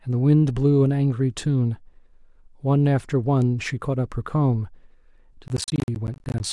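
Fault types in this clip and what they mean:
processor overload crackle: missed processing deadlines punch a rapid string of silent gaps of about 20 ms each into the speech from 5.48 to 6.4 s, giving dense crackle rather than one clean dropout.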